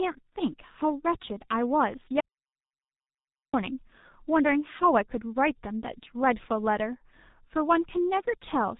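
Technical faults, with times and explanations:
throughout: G.723.1 codec. The speech is muffled and hoarse, with nothing above about 3.8 kHz and consonants smeared together. Unlike a plain low-pass filter, which only dulls the top end, the damage here is heavy and structural: the codec rebuilds the voice from a coarse model updated in 30 ms frames, so the voice turns rough and buzzy and transitions blur. That points to a rate of around 6 kbit/s.
2.20–3.54 s: audio dropout to silence. The speech cuts off abruptly mid-flow and returns just as abruptly about 1.33 s later. The gap is silent, with no room tone or codec hiss. That dead silence separates it from a natural pause, where background sound would carry on, and from packet-loss concealment, which would fill the gap with smeared or repeated sound. The likely cause is the input being lost while silence kept being written.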